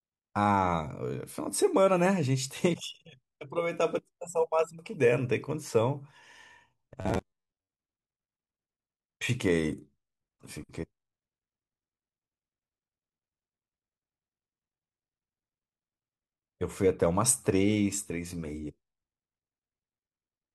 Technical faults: robotic sound from repeated short buffers

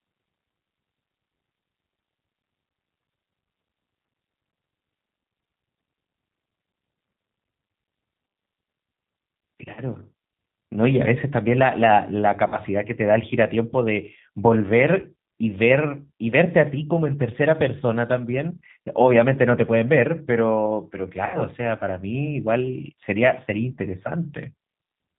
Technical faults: G.729 codec; VoIP packet loss concealed by the speech codec

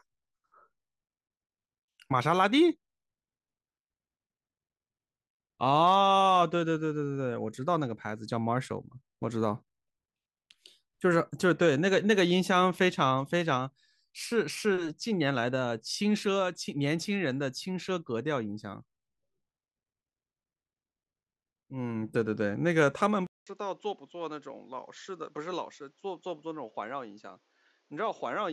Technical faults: input switched to a poorer device

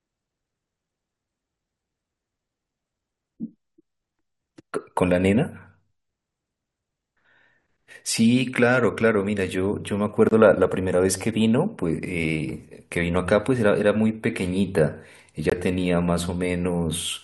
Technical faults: corrupt frame muted

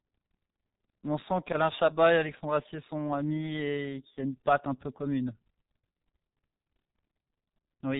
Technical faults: G.723.1 codec

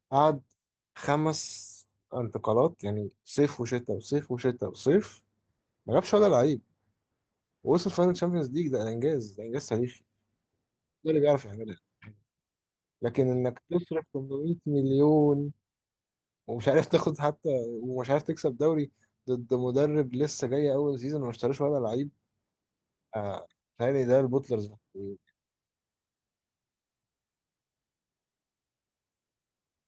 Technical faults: lost packet rebuilt from error correction

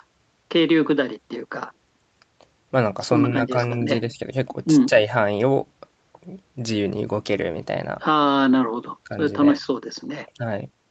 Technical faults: none

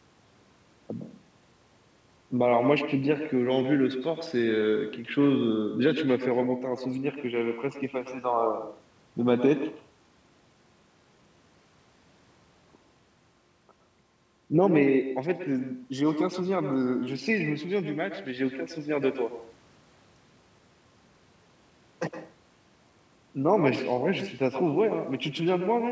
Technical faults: echo with no canceller

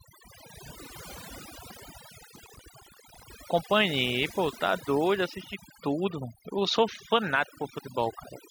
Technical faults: overdone noise removal; processor overload crackle

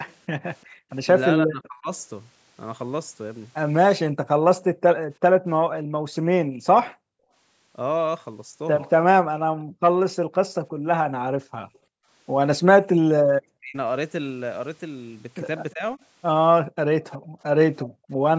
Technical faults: echo leak; background gated by the echo canceller; speech suppressed in double talk

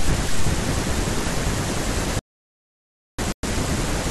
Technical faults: audio dropout to silence; Bluetooth stall

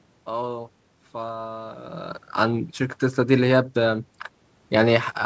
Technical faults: none

